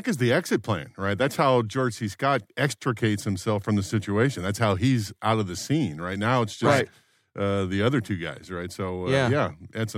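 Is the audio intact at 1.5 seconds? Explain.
Yes, at 1.5 seconds the speech plays through intact, with no dropout, click, distortion or other audible fault at that moment.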